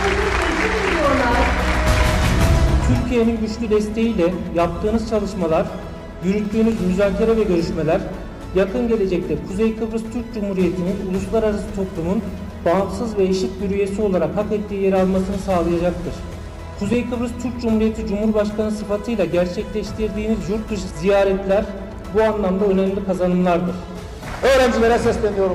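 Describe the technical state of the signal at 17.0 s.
CD scratch ticks run from 16.14 to 17.73 s: seven brief clicks, each only a few milliseconds, where a surface flaw defeated error correction once per disc revolution.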